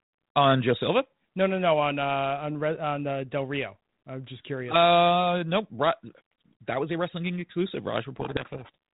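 From 8.20 to 8.75 s the speech collapses into harsh distortion, a codec payload misread. The G.726 code words arrive with their bit order reversed, so the 32 kbit/s decoder follows wrong differences and buries the speech under rasping noise until alignment returns.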